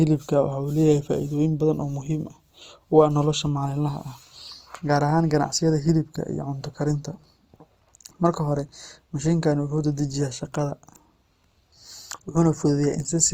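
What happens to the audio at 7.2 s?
At 7.2 s the speech is still carrying the Opus compression that runs through the whole clip, most likely from an encoder working in its music (CELT) mode at a rate that fits about 24 kbps. With too few bits, the encoder preserves each band's energy but fills in the fine detail with folded copies of lower bands or with noise, so the full-bandwidth sound comes through plainly rough and grainy rather than clean.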